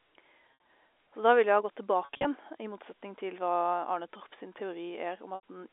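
Packet loss with pitch repetition at 0.51–0.62 s, 2.05–2.25 s and 5.35–5.40 s: the receiver repeats the last pitch period over the gaps, giving brief held, buzzy tones, while the longer gaps fade into silence before the speech returns.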